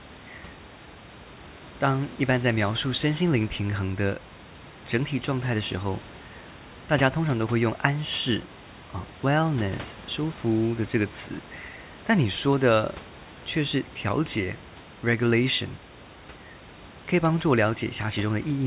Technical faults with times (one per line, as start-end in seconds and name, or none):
none